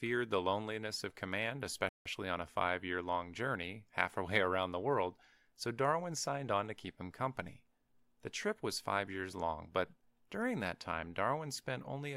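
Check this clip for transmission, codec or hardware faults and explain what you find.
There is one fault, a playback stall. It occurs early, from 1.89 s to 2.06 s. The speech cuts out mid-flow and the output falls silent for about 166 ms. Then it picks up again. The likely cause is the player running short of buffered data, or its audio thread being held up, so nothing reached the output until it recovered. The result is an abrupt hole in the speech, not a fade.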